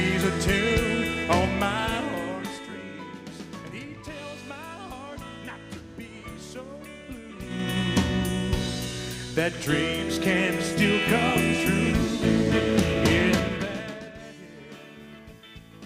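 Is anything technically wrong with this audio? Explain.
Yes. From 7.42 to 7.77 s there is zipper noise. A level change of about 15 dB is applied in 4 dB steps, around ten a second, with no smoothing. Each jump leaves a small click, so a brief zipping rides on the sound.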